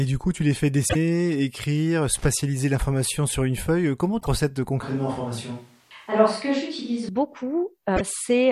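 Just after "coup tu les fais", from 0.85 to 0.96 s, damaged data in the compressed stream produces a short glitch. Corrupted or missing bytes leave the decoder unable to read those frames, so it loses sync and hunts for the next valid header. The same fault returns at 4.17 to 4.28 s and again at 7.93 to 8.01 s.

From 2.17 to 2.26 s, just before "l'information sur une feuille", comes loose connector crackle. A worn or dirty contact makes and breaks in quick succession, chopping the signal. It sounds like an irregular scratchy burst of many tiny clicks. That ragged texture separates it from the codec glitches.

From 4.83 to 7.09 s the speech turns roomy and hollow, with thinner bass and background noise rising to around 35 dB below the speech. The change in and out is abrupt, and the level barely moves. This is likely a switch to a distant microphone, after the close microphone's signal was lost or left out. 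Added reverb would not bring a jump in room noise or a loss of low end at an exact cut point.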